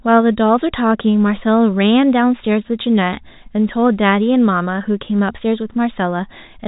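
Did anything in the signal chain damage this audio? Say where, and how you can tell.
No, nothing in the signal chain damages this speech. What can be heard is G.711 telephone coding working as intended: the band stops at about 3.8 kHz, and only a faint quantisation noise rides under the signal and follows its level, which fits the 64 kbps mu-law telephone format.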